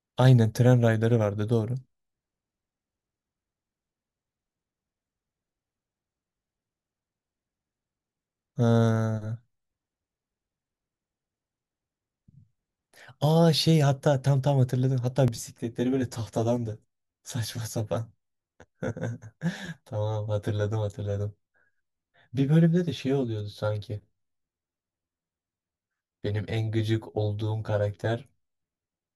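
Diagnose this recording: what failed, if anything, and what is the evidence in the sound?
From 15.28 s to the end of the recording, the speech turns hollow and phasey. This is channel delay (comb filtering) introduced at the driver or buffer stage. One channel arrives around 10 ms late, and when the two are summed to mono, the shared content cancels at evenly spaced frequencies starting near 40 Hz. On a spectrogram this shows as fixed horizontal dark stripes, regularly spaced, from 15.28 s on.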